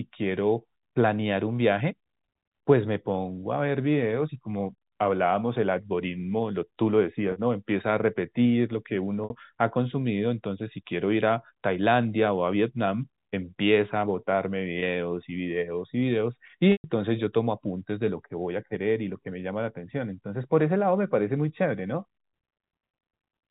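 Packet loss with pitch repetition occurs at 7.32 to 7.36 s, 9.24 to 9.30 s, 14.80 to 14.82 s and 16.72 to 16.84 s, with gaps of 40, 60, 20 and 120 ms, consistent with 20 ms packets going missing. The receiver fills each hole by looping the last pitch period. The three shorter gaps sound like a brief buzzy hold on the sound. The 120 ms gap at 16.72 s outlasts the fade, so it drops into silence before the speech cross-fades back, all within the band limit of the telephone coding.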